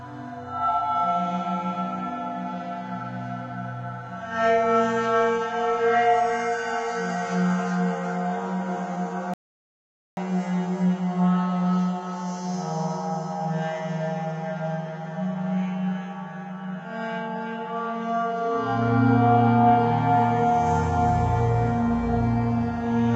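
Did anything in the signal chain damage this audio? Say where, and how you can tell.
Yes. An audio dropout to silence runs from 9.34 to 10.17 s, about 0.83 s of silence with no room tone, likely an input or link loss upstream of the recorder.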